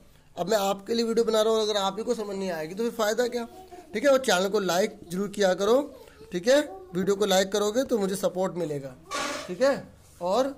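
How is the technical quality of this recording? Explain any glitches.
Nothing in this recording sounds wrong, so there are no glitches to explain.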